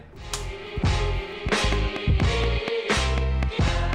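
Something in the chain, likely electrical interference from nearby equipment or a faulty connection or power supply, is injecting a regular pulse into the signal from 1.49 s to 3.94 s. The result is a train of clicks, around ten of them at a steady 4.1 per second, each much the same shape and standing well above the sound itself. They are heard as an even ticking that carries on through quieter moments as well as louder ones.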